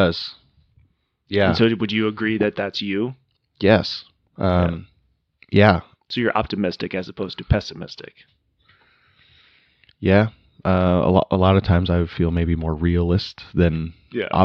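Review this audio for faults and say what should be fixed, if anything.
No technical faults can be heard anywhere in this speech recording. Nothing needs to be fixed.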